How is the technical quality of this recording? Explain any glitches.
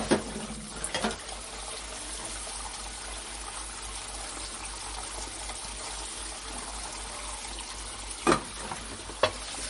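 The technical quality is limited by one fault that runs through the whole clip: MP3 compression, with plainly audible damage from start to finish. The top end stops dead at 11 kHz, which fits a low bitrate of around 40 kbps. The likely cause is an MP3 encoder short of bits. It discarded the treble above that cutoff and dropped weak frequency lines, which switch on and off from frame to frame. The result is a dull, band-limited sound with a watery, swirling texture, and sharp onsets lose their definition.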